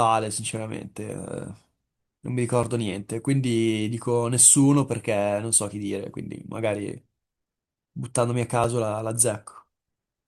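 A gap between stream segments occurs at 2.63 s and again at 8.64 s, exactly 6 s apart, matching segments 6 s long. At each boundary the timestamps of adjacent segments fail to meet, leaving a hole of about 5 ms (4.8 ms, then 4.7 ms) that playback fills with silence. The speech drops out abruptly with hard edges for that instant and resumes, adding a few milliseconds of delay without losing any audio.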